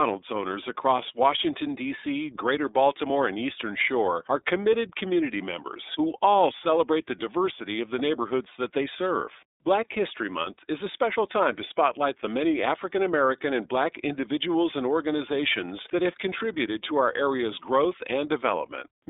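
From start to finish the speech runs through the iLBC codec. Nothing above 3.8 kHz survives, so it sounds thin and phone-like, with a plainly audible rough, synthetic edge from coding each 30 ms frame independently, which fits iLBC's 13.33 kbps mode.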